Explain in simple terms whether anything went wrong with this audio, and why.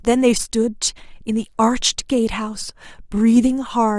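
Nothing went wrong with this audio: no fault can be heard at any point in the recording.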